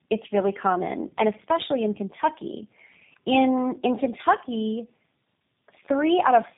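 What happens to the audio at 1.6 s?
Tandem speech coding runs through the whole clip, including 1.6 s. Two chained speech codecs re-encode each other's errors, leaving rough, warbly, muffled speech, and the spectrogram is empty above 3.8 kHz.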